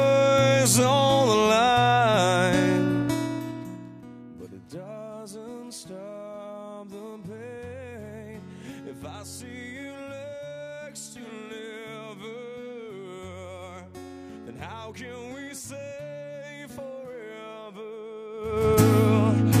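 Zipper noise, from 2.96 to 4.12 s and 18.32 to 18.68 s: gain moves in unsmoothed 2 dB steps, first down about 20 dB at roughly seven steps a second, then up about 20 dB far faster, so each step clicks audibly.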